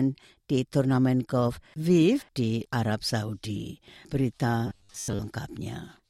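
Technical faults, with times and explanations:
4.67–5.21 s, robotic sound from repeated short buffers: the sound turns into a rigid, metallic buzz at 100 Hz, likely from a 10 ms chunk being replayed while new audio arrives late, so most of the real audio is skipped. Unlike silent dropouts, the gaps are filled with a fixed-pitch buzz.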